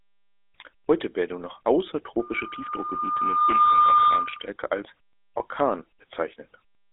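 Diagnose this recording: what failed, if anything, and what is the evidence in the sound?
Codec stage: GSM full-rate coding throughout, with buzzy, gravelly roughness, a 300 Hz to 3.6 kHz phone band and nothing above 3.8 kHz. That roughness, fitting a 13 kbps pulse-excited coder, separates it from clean band-limiting.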